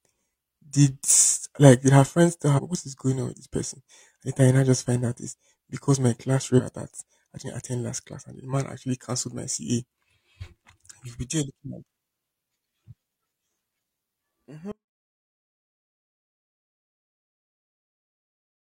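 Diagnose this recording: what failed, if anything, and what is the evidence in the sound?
The codec stage failed twice with damaged data in a compressed stream. Right after "did her friends tell", a 60 ms fault runs from 2.54 to 2.60 s. After "is because my class", a second blip runs from 6.55 to 6.61 s, and the sound resumes at "that I didn't attend". Corrupted bytes make the decoder misread frames and resynchronise at the next header. That is why each event is brief.

From 14.72 s to the end the signal drops out abruptly and never returns. This is an audio dropout to a faint residue: the gap keeps a faint leak of sound about 35 dB below the normal level rather than true digital silence. That residue shows the downstream path stayed live, so the break was likely upstream, in the analogue wiring or a connector losing the wanted signal. The sudden cut, with no fade or gradual decay, rules out a deliberate pause or a level ramp.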